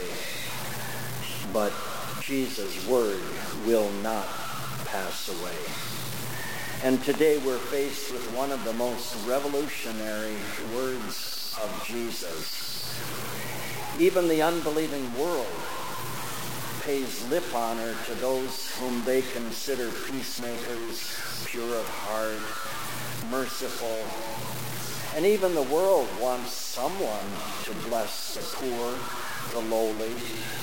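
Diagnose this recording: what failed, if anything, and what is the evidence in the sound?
Across the clip a coarse, grainy distortion follows the sound, sitting only about 10 dB below it, and quiet passages sputter or fall silent. That is low bit depth without dither, likely a sample-format conversion truncating to 4 bits; dithered hiss would stay constant.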